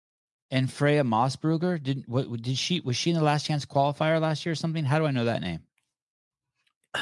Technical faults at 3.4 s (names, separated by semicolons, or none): none